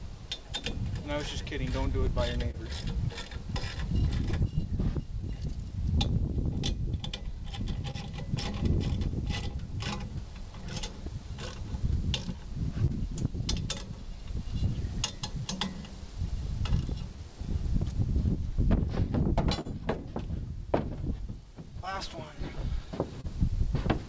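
Clock drift between sender and receiver runs through the whole clip: the sender's clock is roughly 2% slow, so the jitter buffer keeps draining and small hiccups recur at uneven intervals. From 0.06 to 22.57 s this shows as repeated timing corrections. The receiver keeps repeating short pieces, all in one direction, to make up for the slow sender. That plays the audio at about 99% speed and adds roughly 200 ms in total, heard as an unsteady tempo rather than as holes.

Between 0.72 and 11.09 s there are scattered short gaps, about ten of them, the longest roughly 30 ms. Each is patched by continuing the last sound, giving brief ticks or smears. Another set of about ten runs from 12.87 to 21.44 s, the longest roughly 40 ms. Nothing is missing in either set, and unlike the timing corrections, each gap is a separate concealed loss.

At 23.21 to 23.26 s comes a short stall from a late packet. 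The buffer runs empty and the last sound is held for 31 ms, then the audio resumes from the same place. Unlike the scattered gaps, this is a single held sound.

All of this comes through a G.722 call path at 64 kbps, with nothing above 8 kHz.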